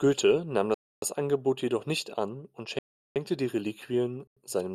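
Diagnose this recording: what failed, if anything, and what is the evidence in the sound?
Block of digital silence, three times: 0.74 to 1.02 s (about 0.28 s), 2.79 to 3.16 s just after "jedoch nicht an und" (about 0.37 s), and 4.27 to 4.37 s (about 0.09 s). The stage is the driver or buffer. The speech drops to silence and returns with no fade. The 0.37 s and 0.09 s gaps fit runs of 16384 and 4096 samples, whole buffers the program failed to fill in time.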